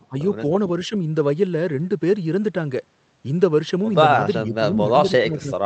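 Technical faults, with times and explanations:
0.09–0.18 s, 0.88–0.95 s and 4.43 s to the end: speech suppressed in double talk. The speech ducks briefly at first, by roughly 15 dB and then a gentler dip of about 5 dB, and at 4.43 s it sinks by about 20 dB and stays down to the end. That pumping is likely an echo canceller that couldn't tell the far side's loudspeaker echo from this talker and clamped down on both. Throughout, the call codec's top end stops around 8 kHz.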